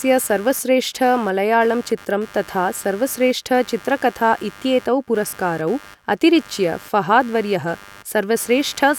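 Computer activity noise runs throughout: processor load swings disturb the shared audio ground, producing a buzz pulsing around 100 times per second, roughly 25 dB below the speech.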